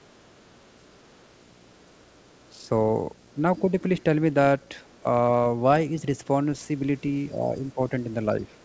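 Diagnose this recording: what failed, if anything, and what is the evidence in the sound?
A video or display buzz runs through the whole clip at the 60 Hz field rate, sitting about 30 dB below the speech. This is an analogue wiring fault: a screen or video cable is coupling its field-rate energy into the audio path before conversion.

The other side's voice leaking through shows up as faint scraps at 0.94 to 0.99 s and again from 8.61 s to the end, roughly 35 to 40 dB under the talker. At the call-processing stage, the echo canceller likely left some loudspeaker pickup in the microphone signal.

Speech suppressed in double talk appears between 7.33 and 7.91 s. The talker's level dips by about 5 dB in pieces totalling around 0.4 s. The likely cause is the echo canceller turning down the microphone path while far-end audio was playing at the same moment.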